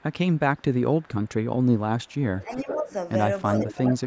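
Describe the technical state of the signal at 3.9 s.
At 3.9 s the echo canceller likely mistook double talk for echo and turned the talker down, so from 3.67 to 4.06 s the speech dips by about 5 dB.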